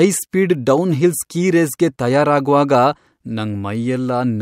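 Nothing in the recording stood out as a technical problem on listening.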